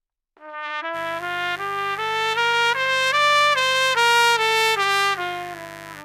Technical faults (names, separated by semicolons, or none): mains buzz